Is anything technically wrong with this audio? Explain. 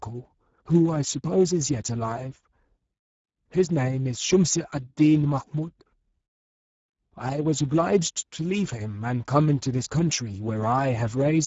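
Yes. Throughout, the speech carries plainly audible Speex codec damage. Starved CELP excitation makes it hoarse and noisy, fitting roughly 10 kbps, with nothing above 7.7 kHz.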